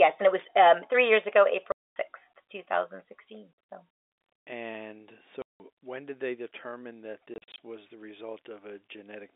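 Speech over a telephone-band G.711 line, roughly 300 Hz to 3.6 kHz, is broken by packet loss filled with silence: hard-edged gaps at 1.72–1.96 s (240 ms), 5.42–5.60 s (180 ms) and 7.34–7.58 s (140 ms in short dropouts), consistent with 20 ms packets.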